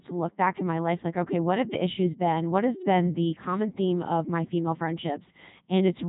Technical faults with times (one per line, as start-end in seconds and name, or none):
0.00-6.08 Codec 2 vocoder